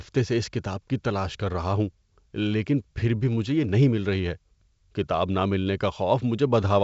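The speech comes through G.722 wideband telephone coding at 64 kbit/s, with nothing above 7.7 kHz, and no technical faults can be heard.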